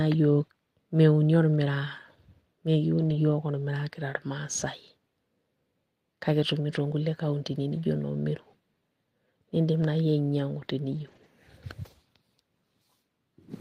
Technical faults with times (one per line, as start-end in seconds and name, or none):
1.55 lost packet rebuilt from error correction
2.97-3.15 lost packet rebuilt from error correction
9.81-9.83 lost packet rebuilt from error correction
10.91-11.25 lost packet rebuilt from error correction